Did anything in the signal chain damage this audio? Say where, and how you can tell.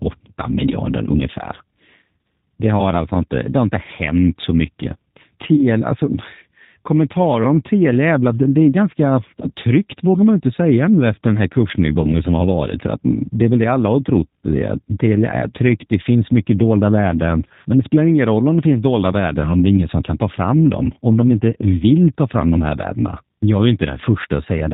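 Yes. At the codec stage, the audio is plainly rough and synthetic, which fits G.729 at 8 kbit/s. A spectrogram would show nothing above 4 kHz, and the remaining harmonics would look grainy because the speech is rebuilt from a filter, a pitch predictor and sparse pulses.

VoIP packet loss concealed by the speech codec occurs at the network stage, at 2.17 s, at 5.56–5.63 s after "så mycket", and at 12.02–12.13 s between "nu efter den här" and "som har varit". Each gap suggests one or two lost 10 ms frames. The decoder extends its last pitch and filter into a fading buzzy tone or coloured noise, seen as smeared, repeated spectral content and a shrinking waveform envelope.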